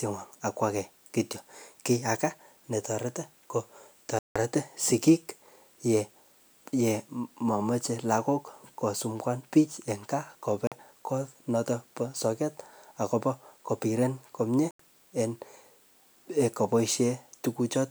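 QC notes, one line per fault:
4.19–4.36 s, 10.67–10.72 s, 14.71–14.80 s: Bluetooth stall. The speech drops to silence for 167 ms after "netareti ko", 46 ms before "konoton ba soget akobo", and 86 ms after "soget akobo kobiren komie", then resumes. This is likely interference delaying packets until the headphone buffer ran empty.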